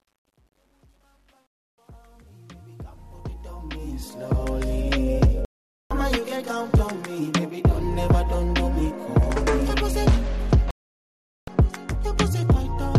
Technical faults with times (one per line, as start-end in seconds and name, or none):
0.00-4.78 truncation distortion on a fade
1.47-1.78 digital broadcast dropout
5.45-5.91 digital broadcast dropout
10.71-11.48 digital broadcast dropout